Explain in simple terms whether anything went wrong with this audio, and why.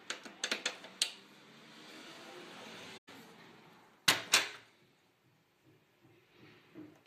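From 1.96 to 3.33 s there is a harsh, raspy buzz under the sound that comes and goes. This is GSM phone buzz: a nearby mobile phone sending data in radio bursts about 217 times a second, which the audio circuitry picks up.

At 2.97 s the sound softly fades out for about 0.11 s, then fades back in at 3.09 s. This is AAC frame loss with muting: a few compressed chunks of audio went missing, so the decoder played silence in their place.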